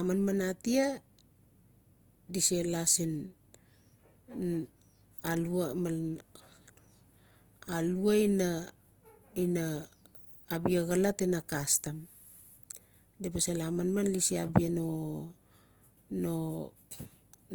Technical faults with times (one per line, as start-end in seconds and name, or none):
0.00-17.54 Opus compression